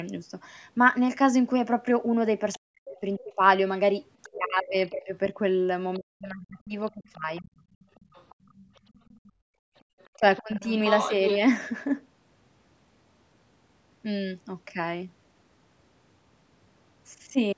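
A speech recording from a call, with the microphone path's high-pass filter and an 8 kHz ceiling heard as normal call processing. Other side's voice leaking through appears as brief scraps at 2.53 s and 4.23 s, each about 25 dB below the talker, then as a longer, stronger stretch from 6.89 to 11.38 s at about 10 dB below. It is likely loudspeaker playback that the echo canceller failed to fully remove from the microphone. Speech suppressed in double talk runs from 2.58 to 7.5 s, with the talker's voice dipping in pieces totalling around two seconds and falling as much as roughly 40 dB. A shorter dip of about 20 dB falls between 10.17 and 10.69 s. Both likely come from the canceller pulling everything down because it could not separate the talker from the echo while both sides spoke. Background gated by the echo canceller occurs between 7.78 and 9.89 s, where the room sound drops by up to about 30 dB for roughly a second in total. 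The canceller clamped the microphone hard while the loudspeaker was active, then released it.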